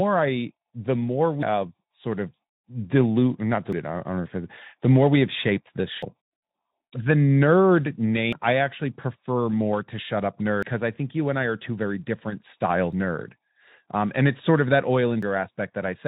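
At 1.43, 3.73, 6.03, 8.33, 10.63, 12.93 and 15.23 s the speech jumps forward, each time dropping about a fifth of a second, with the two sides joined directly and no gap. This is likely audio missing between chunks, lost as one 2.5 s block closes and the next opens. The strict 2.3 s spacing and the seamless splice set it apart from network dropouts, which arrive irregularly and leave silence or smeared concealment. The narrowband Speex sound, with nothing above about 3.9 kHz, is unrelated to these skips.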